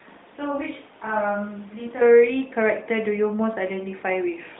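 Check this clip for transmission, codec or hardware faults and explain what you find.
One fault is audible, in the opening section. From the start of the clip until 2.01 s, the speech sounds roomy, hollow and thin in the bass, roughly 5 dB quieter, with room noise only about 20 dB below it. This is likely a switch to a distant microphone, with the close microphone's signal missing. The whole clip passes through the AMR narrowband mobile codec, which limits it to about 150 Hz to 3.7 kHz and adds only light coding damage.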